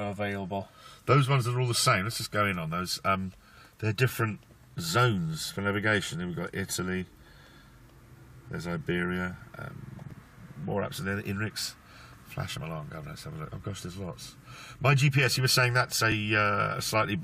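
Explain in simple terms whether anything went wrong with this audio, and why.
Three small clicks or stutters are heard, at 4.09, 10.11 and 16.12 seconds. These come from overlapping chunks: the audio was handled in 6-second pieces, and each new piece began slightly early, so about 13 milliseconds plays twice at every join.

From 11.19 to 14.02 seconds, a faint, raspy buzz sits under the sound. This is mains buzz, electrical interference from the 50 Hz power supply, probably from a dimmer or poor shielding, adding sharp spikes whose harmonics reach far above the basic hum.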